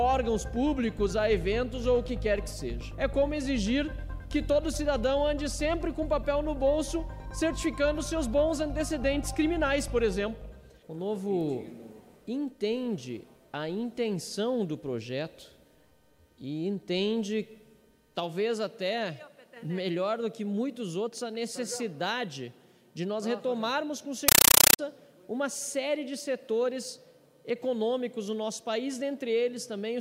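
From 24.28 to 24.79 s the sound is replaced by loud, harsh, chattering static. This is a compressed stream played as audio. An AC-3 (Dolby Digital) bitstream has reached the output as if it were ordinary samples, without being decoded. Each coded frame comes out as a burst of noise about 8 ms long, followed by silent padding. The bursts repeat 31.25 times a second, giving the chatter its rattling rhythm. The burst length fits a 384 kbps AC-3 stream.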